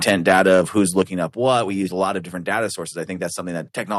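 From 0.07 to 0.59 s, and again from 0.98 to 1.01 s just before "up what", there is microphone overload. The loudest peaks exceed the converter's limit by about 4 dB and then about 1 dB, likely because the input gain was set too high. On the waveform these peaks appear as flat-topped tops on a small share of samples, and on the spectrogram as vertical broadband smearing. It sounds harsh and crackly.

At 1.02 s, right before "up what", the microphone volume steps down by about 5 dB, likely because the call software reacted to that clipping. At 2.04 s, between "use a" and "of different data sources", it steps down by about 2 dB, likely for the same reason. Each drop appears as an abrupt step in the waveform envelope and a darker band across the spectrogram, with voice and background falling together.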